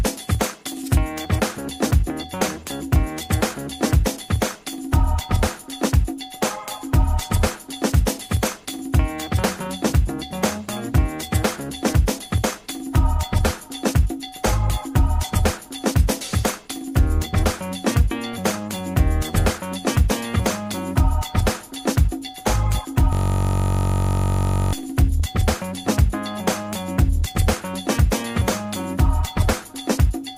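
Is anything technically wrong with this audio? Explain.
Yes, there is one fault. From 23.13 to 24.73 s there is a system hang loop. The machine stalled while the audio hardware kept replaying its ring buffer, so a 21.33 ms slice repeats about 75 times, which fits a 1024-sample buffer. It sounds like a steady buzz at 46.9 Hz. The waveform shows one identical cycle tiled end to end, and the spectrogram shows frozen horizontal lines spaced 46.9 Hz apart.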